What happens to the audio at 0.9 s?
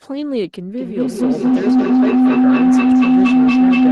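A low howl around 300 Hz swells over the speech, pulsing roughly five times a second and peaking about 11 dB above it. This feedback howl runs from 0.78 s to the end: a microphone re-captures a nearby loudspeaker on the same call, gaining level each trip.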